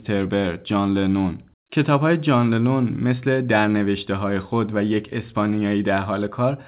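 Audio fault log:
No faults heard anywhere in this speech recording.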